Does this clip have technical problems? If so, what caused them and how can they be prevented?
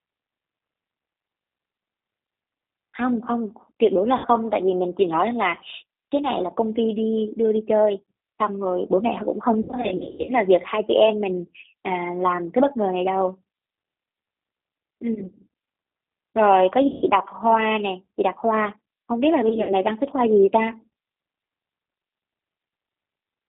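Yes. The G.729 codec runs throughout: the speech is confined to roughly 250 Hz to 3.7 kHz and sounds plainly rough and synthetic, because it is rebuilt from a vocal tract filter, pitch predictor and sparse pulses at a rate that fits 8 kbit/s. Preventing this means negotiating a wideband codec such as G.722 or Opus.

VoIP packet loss concealed by the speech codec occurs at 4.18–4.27 s, 9.61–10.32 s (the worst, scattered), 15.14–15.33 s, 16.88–17.02 s and 19.49–19.74 s. In each gap the decoder stretches the last sound into a fading buzzy tone or coloured noise, and the sound stays weak briefly afterwards. Preventing this requires a steadier network path, jitter buffering or forward error correction.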